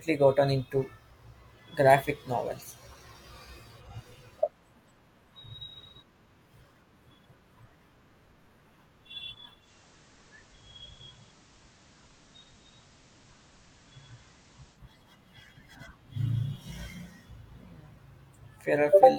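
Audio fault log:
9.60 to 14.82 s, digital radio blending to analogue. Sound cross-fades over 0.11 s to FM. Hiss rises to about 30 dB below the signal. Level holds steady.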